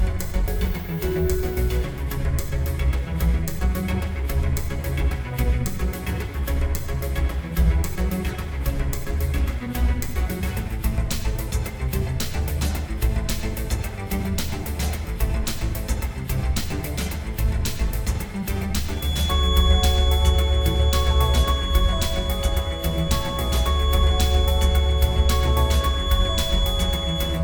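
From 18.88 s to the end at 27.44 s, a feedback whistle sits well below the main sound: a thin, steady 3.4 kHz tone that swells and fades slowly in level, likely from a loudspeaker-to-microphone loop held just at the feedback point. Unlike mains hum, it is a single high pitch with no low harmonics.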